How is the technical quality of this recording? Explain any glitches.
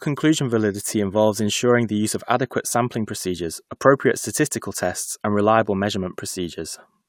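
Nothing to flag here; I can hear no technical faults anywhere in the recording.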